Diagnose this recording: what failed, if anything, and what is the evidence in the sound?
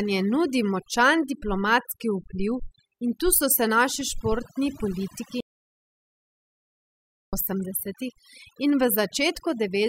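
Overdone noise removal runs through the whole recording at the processing stage. The background sits at near silence with twinkling specks. The reducer is suppressing individual frequency bands near its noise estimate, taking quiet speech components with them.

An audio dropout to silence follows "se naši športni politiki", from 5.41 to 7.33 s, about 1.9 s of silence with no room tone. The likely cause is loss of the input signal at the wiring or device stage while the recorder continued writing silence.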